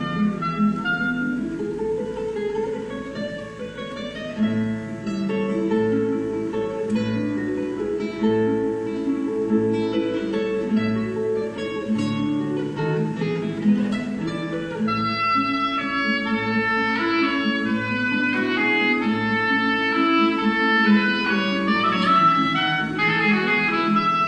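No technical faults can be heard anywhere in this audio.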